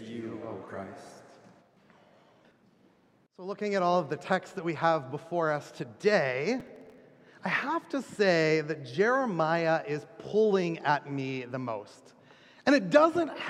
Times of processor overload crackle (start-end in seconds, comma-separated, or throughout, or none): 6.60-6.98